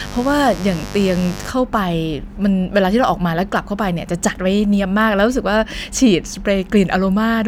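From 0.0 to 1.5 s a mains buzz sits under the speech, at roughly 15 dB below it. Sharp switching spikes from a 50 Hz supply spray harmonics up to several kilohertz, so it rasps rather than droning like a smooth, low hum.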